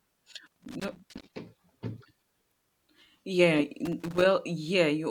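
From 0.46 to 1.29 s the speech is broken by loose connector crackle, an irregular burst of scratching. A worn or dirty contact in the signal path is making and breaking as it shifts, chopping the audio into fragments, and any DC present on the line turns each break into a click. The same crackle returns, shorter, from 3.85 to 4.25 s, consistent with the contact being disturbed again.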